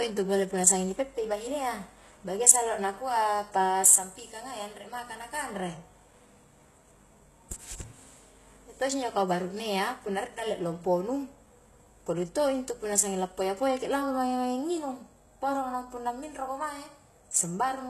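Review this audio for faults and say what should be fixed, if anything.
The treble above 12.3 kHz is missing throughout the speech, and s sounds turn gritty and metallic. This is likely HE-AAC compression at a very low bitrate, which fits about 16 kbps. Its rebuilt top band doesn't match the real harmonics. Encode at a higher bitrate, or use a codec that keeps the full treble.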